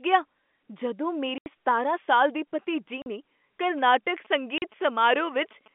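At 1.38–1.46 s, between "ਗਿਆ ਜਦੋਂ" and "ਸਤਾਰਾਂ ਸਾਲ ਦੀ ਭਤੀਜੀ", packet loss filled with silence leaves an 80 ms hole with hard edges. Shorter 40 ms gaps follow at 3.02–3.06 s, after "ਸਤਾਰਾਂ ਸਾਲ ਦੀ ਭਤੀਜੀ", and at 4.58–4.62 s. These gap lengths fit 20 ms packets.

From 3.63 to 5.68 s, GSM signalling bursts from a nearby 2G phone are rectified by the audio circuit. They add a galloping dit-dit-dit of short 217 Hz buzzes, roughly 25 dB below the speech.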